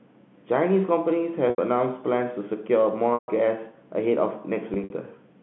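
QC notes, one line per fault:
1.50 to 1.58 s, 3.14 to 3.28 s, 4.74 to 4.90 s: packet loss with pitch repetition. The receiver fills each 80 ms, 140 ms and scattered 80 ms gap (longest run 60 ms) by looping the last pitch period, giving a held, buzzy tone. The 140 ms gap fades to silence before a cross-fade back. On a spectrogram, flat, frozen harmonics sit within the 150 Hz to 3.5 kHz telephone band. The gaps fit 20 ms packets.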